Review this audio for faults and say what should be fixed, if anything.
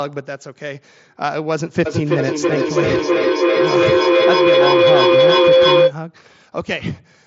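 A feedback howl runs from 1.86 to 6.0 s: a loudspeaker in the same room was feeding the microphone with gain above unity, so each trip grew louder. It narrows to a tone near 500 Hz, pulsing about every third of a second and peaking about 9 dB above the speech. Keep only one device's audio open per room, or mute the second device's microphone and speaker, to break the loop.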